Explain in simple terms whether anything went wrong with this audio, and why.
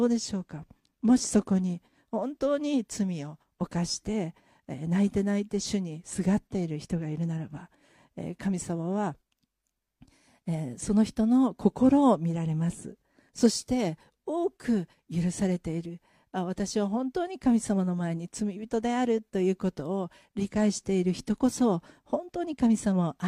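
Nothing went wrong here.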